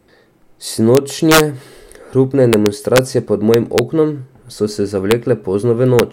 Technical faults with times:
0.95-1.40 integer overflow
2.53-2.99 integer overflow
3.54-3.79 integer overflow
5.11 integer overflow
5.99 integer overflow

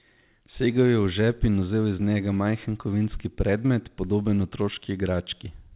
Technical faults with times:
none

